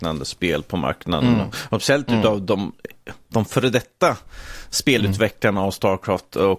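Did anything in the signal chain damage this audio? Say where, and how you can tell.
No, nothing in the signal chain has left an audible mark on this speech. None of the stages, from the wiring and converter through to storage and playback, shows any sign of damage.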